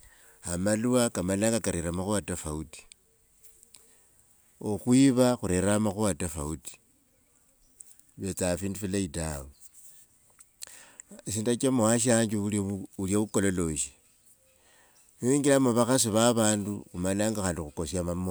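No technical fault can be heard anywhere in the speech recording, and the signal stays steady and intact throughout.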